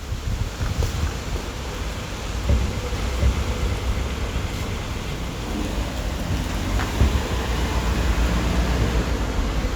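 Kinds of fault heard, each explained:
Doubled audio track: from 2.95 to 5.13 s a second full-band copy of the sound trails the original by roughly 0.7 s, a few dB quieter and dry, likely from a second capture path. A spectrogram and waveform show every event repeated, with the copy starting and stopping abruptly.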